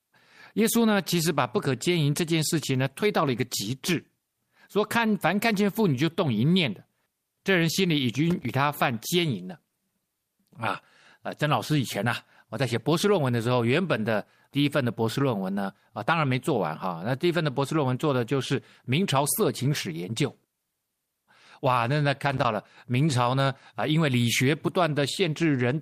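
At 8.30 s the speech is broken by loose connector crackle lasting about 0.2 s, until 8.50 s. A worn or dirty contact in the cable path is making and breaking as it shifts. Each break chops the signal. The result is a brief, irregular burst of scratching over the speech. It returns at 22.32 s for about 0.13 s, ending at 22.45 s.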